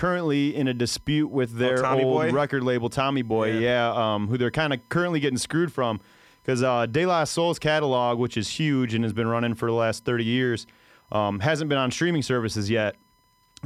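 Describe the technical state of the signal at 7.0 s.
At 7.0 s, as across the whole speech clip, a USB whine sits under the signal: a steady 1 kHz tone, roughly 40 dB below the speech, from the bus's 1 ms frame current leaking through power or ground. A spectrogram shows an unbroken horizontal line at 1 kHz.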